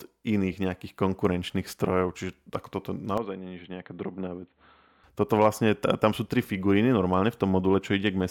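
Speech clip where, from 3.18 to 5.04 s, the sound goes dull and boxy with nothing above 4.2 kHz, drops a few dB and picks up a faint new noise floor, then clears again, likely an input switched to a poorer device, changing over with no gap.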